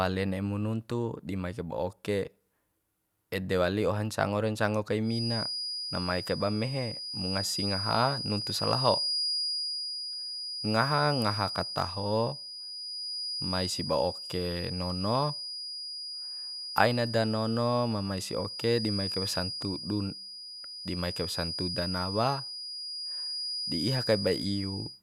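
From 5.01 s, just after "ra ncango kai", a feedback whistle at 4.9 kHz sits a few decibels below the speech until the end, thin, steady and swelling and fading slowly in level. It is likely a loudspeaker-to-microphone loop held right at the edge of feedback.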